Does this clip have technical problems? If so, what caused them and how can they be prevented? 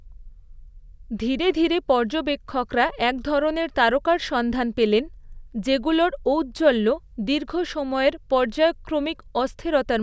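No, no technical faults here.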